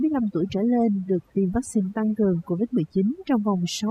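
From start to finish the speech carries overdone noise removal, where a denoiser was pushed far too hard. It clamps individual frequency bands down to nothing whenever they sit close to its noise estimate, and the quieter parts of the voice get swallowed along with the noise. So the gaps fall to near silence dotted with little twinkling specks.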